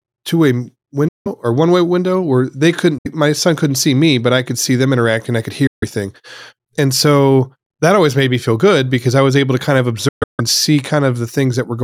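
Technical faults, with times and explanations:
1.08–1.28 s, 2.98–3.07 s, 5.67–5.84 s and 10.08–10.41 s, Bluetooth dropout: the sound cuts to silence for about 65 to 170 ms, likely from late wireless packets being discarded. The gap after "window where they couldn't" comes before "my son couldn't see", and further gaps follow "interact and i could" and "able to kind of". The last gap is broken into pieces over 0.3 s. Each resumes further along, and shows as blank, sharp-edged vertical strips on the waveform and spectrogram.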